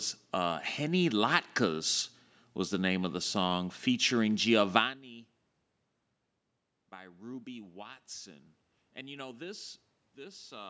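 From 6.90 s to 10.65 s there is automatic gain rising. The level reaching the microphone has dropped by about 21 dB, a little after the talker moves away around 5 s, and the gain control slowly adds about 7 dB, so the speech and room noise swell together.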